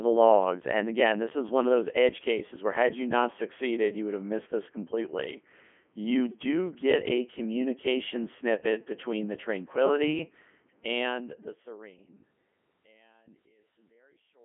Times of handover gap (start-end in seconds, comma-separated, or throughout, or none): none